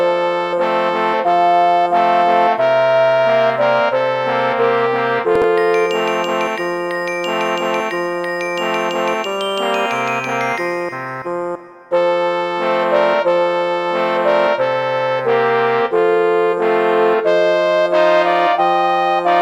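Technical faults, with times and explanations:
5.36 to 5.44 s, chunks out of order: a short block of about 21 ms plays three blocks later than it should, after material meant to follow it. Nothing is missing, but the reordering creates three hard joins, heard as a brief jumbled stutter.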